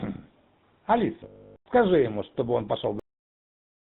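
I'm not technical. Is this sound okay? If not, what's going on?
No, it isn't. There are three separate problems in this speech clip.

The whole thing has gone through the GSM full-rate codec, the compression used in early mobile phones. It simplifies the voice into a rough model driven by a stream of regular pulses and throws away everything above 4 kHz. That's why the speech sounds buzzy, gravelly and a bit muffled from start to finish, and the damage is easy to hear here.

Then there are lost GSM frames from 1.24 to 1.66 s. For about 0.42 s the data simply didn't arrive. The phone system covered the gap by reusing the settings of the last good piece of sound at lower and lower volume. You hear a brief rough, metallic ringing in place of the speech, and because the dropout is this long, it fades away to silence before the audio comes back.

Finally, there's a cut-off end at 2.99 s. The last chunks of audio were never saved or played, so the recording stops dead in the middle of a sound. 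There's no natural trailing off. It drops straight into complete digital silence, and it stays silent for almost a second until the file ends.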